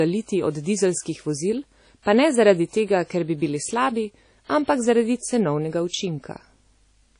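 Low-bitrate audio saved at a high bitrate runs throughout this speech clip: nothing is present above about 10.1 kHz, and the coarse, smeared texture of heavy compression stays in every part of it. The sound is likely a low-bitrate original, consistent with something like 32 kbit/s WMA, later re-encoded as high-bitrate MP3, perhaps 320 kbit/s. That second pass cannot restore the missing top end or the detail the first encoder discarded; it only preserves that damage in a larger file.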